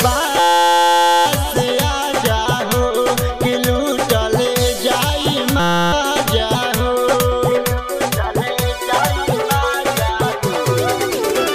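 From 0.40 to 1.26 s and again from 5.60 to 5.93 s, a system hang loop replays one 5.8 ms slice, which fits a 256-sample buffer, producing a steady 172 Hz buzz rather than a gap or slow stutter. Little audio is lost.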